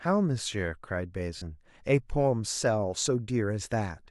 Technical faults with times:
1.37-1.42 lost LE Audio frames

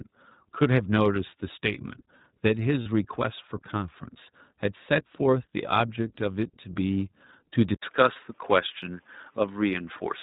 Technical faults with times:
0.00-10.22 iLBC codec
2.82-2.88 lost iLBC frames
7.74-10.22 input switched to a poorer device
8.14-8.17 lost iLBC frames

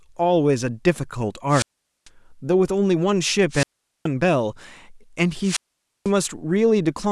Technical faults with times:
1.49-2.08 wireless microphone squelch dropout
3.50-4.07 wireless microphone squelch dropout
5.41-6.11 wireless microphone squelch dropout

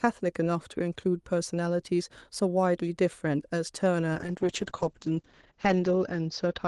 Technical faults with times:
4.14-6.67 call bitrate drop

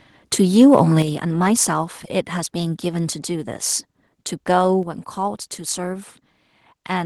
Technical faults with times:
0.60-0.81 microphone overload
1.02 microphone volume stepped down
4.83 microphone volume stepped down

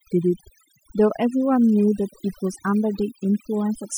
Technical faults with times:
0.00-3.98 overdone noise removal

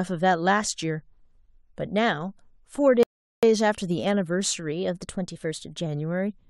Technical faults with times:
3.03-3.43 rebuffering stall
4.72-5.86 drift correction step

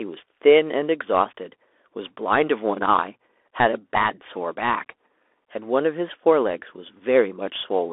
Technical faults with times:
0.00-7.92 Bluetooth CVSD headset codec

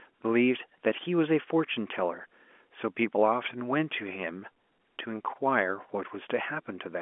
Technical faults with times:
none

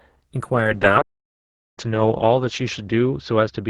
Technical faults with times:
0.55-3.69 call bitrate drop
1.01-1.78 playback stall

